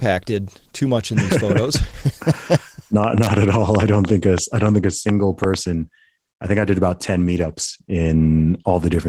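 From start to finish the speech sounds muffled and hoarse, with a slightly robotic texture. That is Opus voice compression at a low rate, which fits roughly 16 kbps in hybrid mode. The lower band is coded by linear prediction with a coarse excitation signal, and a thin transform layer carries the top of the fullband range. Little bit budget is left for detail, so the damage is plainly audible.

From 3.04 s to 5.55 s a train of clicks ticks and pops over the audio, including the gaps. There are about ten clicks, all much the same shape, arriving at an uneven pace that averages 4.4 per second. The loudest stand out by roughly 15 dB. Repeated pulses like these likely come from electrical interference from nearby equipment or from a faulty connection or power supply.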